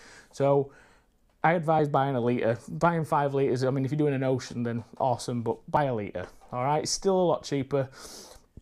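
At 1.79 s there's a tiny skip, and the same thing comes back at 5.77 s, roughly 4 seconds later. That's an overlap between stream segments: the timestamps of adjacent segments claim a sliver of shared time, so the player trims about 6 ms that was never actually duplicated. The waveform jumps across the gap, giving a short tick or micro-skip. The 4-second spacing lines up with the segment boundaries.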